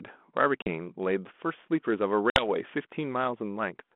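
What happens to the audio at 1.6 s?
Nothing goes wrong at 1.6 s: the speech carries on intact, with only the light coloration of the 32 kbit/s G.726 ADPCM telephone path and its 200 Hz to 3.5 kHz band.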